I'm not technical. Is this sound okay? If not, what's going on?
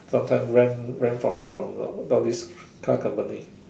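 No, there's one hiccup. From about 1.29 to 1.61 seconds the speech stops moving forward and you hear a short buzzy hold that fades, roughly a third of a second long. That's a call audio freeze, and it's likely caused by data getting stuck on its way across the network. The receiving end filled the wait by stretching the last bit of sound. Then the speech picks up right where it left off, so nothing is lost, but everything after that point comes about 0.3 seconds later.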